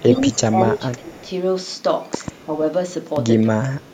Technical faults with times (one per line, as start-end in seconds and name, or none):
0.00-0.21 echo leak
0.00-1.29 speech suppressed in double talk
1.08-1.21 echo leak
2.14-2.30 loud pop
2.41-2.53 speech suppressed in double talk
3.16-3.19 loud pop
3.58-3.94 speech suppressed in double talk